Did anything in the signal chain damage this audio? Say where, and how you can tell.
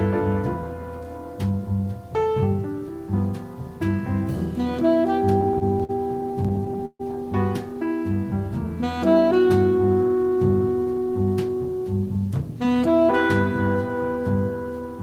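Yes. Repeated stalls (stutter) between 5.41 and 7.01 s, a network and jitter buffer fault: packets arrived late, the buffer kept emptying, and the receiver stretched the last sound through sixteen short gaps of up to 139 ms. About 0.34 s was filled in, so nothing is lost, but it drags.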